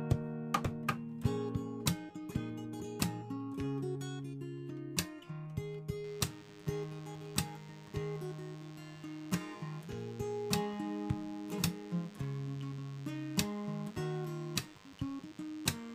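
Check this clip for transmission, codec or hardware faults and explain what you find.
One fault is present: DECT cordless phone buzz. It starts at 6.04 s and runs to the end of the clip. It sits roughly 20 dB below the wanted audio. A DECT handset or base station nearby transmits a short radio burst every 10 ms. Some stage of the audio circuit rectifies those bursts, so the burst envelope becomes audible. The result is a steady buzz at 100 Hz, rich in harmonics, layered under the sound.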